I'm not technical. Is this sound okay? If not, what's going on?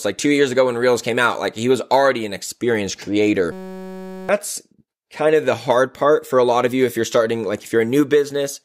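No. Just after "was already an experienced", at 3.52 s, the system briefly froze while the sound hardware kept replaying one tiny 5.33 ms scrap of audio, a system hang loop. Until 4.29 s you hear a steady 188 Hz buzz instead of speech, and most of a second of speech is lost.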